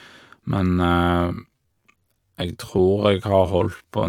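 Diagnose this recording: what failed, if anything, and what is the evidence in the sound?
From 0.82 s to the end, the speech suddenly drags to about 0.62 times its pace while its pitch holds steady. This is a time-stretched section, likely from software processing that lengthened the audio by repeating short pieces instead of resampling.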